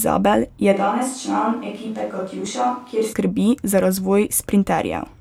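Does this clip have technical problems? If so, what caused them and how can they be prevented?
Yes. From 0.75 s to 3.12 s the speech turns hollow and roomy, with thinner bass, a level drop of about 5 dB and room noise only about 30 dB below the voice. That points to a likely switch to a distant microphone after the close one dropped out. Unlike a simple gain change or added reverb, the tone changes abruptly at both edges. Monitoring the close microphone's feed and fitting a backup lavalier or wireless receiver prevents this.

At 2.46 s there is a tiny skip where a few milliseconds of sound vanish and the waveform jumps. This is an overlap between stream segments: two segments claimed the same time, and the player trimmed the overlapping stretch from sound that was not actually duplicated. It differs from a dropout because nothing goes silent; the sound just skips forward. The timing fits a segment boundary in a stream cut into 4-second pieces. 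Keeping segment timestamps contiguous in the packager or encoder prevents it.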